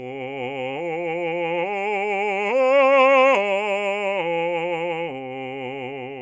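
No technical faults detected anywhere in the music.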